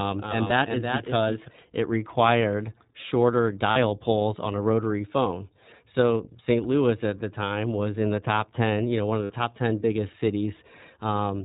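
The whole clip passes through the iLBC codec, probably at about 15 kbps in 20 ms frames. It is band-limited below 4 kHz, with plainly rough, synthetic coding damage. From the start until 1.48 s, just before "it required shorter", a doubled audio track runs: a dry copy trails about 400 ms behind at roughly 5 dB lower, then stops abruptly, likely from a second, slower capture path. Lost iLBC frames occur at 0.48–0.52 s, at 3.72–3.77 s between "it required shorter" and "poles on a rotary", and at 9.24–9.32 s after "you know one of". These gaps of 20, 40 and 60 ms are filled with a buzzy held pitch cycle, and the sound recovers at once.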